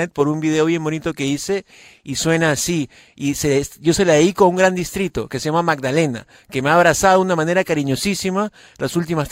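Speech recording, no technical faults detected on listening.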